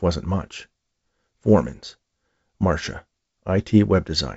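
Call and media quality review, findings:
No faults found in the speech. The G.722 wideband path at 64 kbit/s carries the speech up to about 7 kHz, with at most a faint hiss from the coarsely coded upper band.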